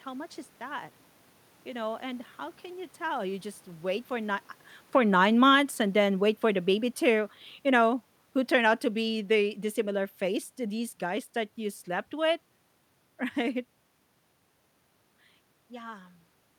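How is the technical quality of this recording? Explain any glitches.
The recording has one glitch: a gain control pulling the level down partway through the speech.

Automatic gain falling, from 4.81 to 11.31 s: the automatic gain control judged the input too loud or its background noise too strong, and eased its gain down by about 8 dB over those six and a half seconds. The speech sinks steadily, and the room noise sinks with it, which separates this from the talker's own movements near 4 and 13.5 s.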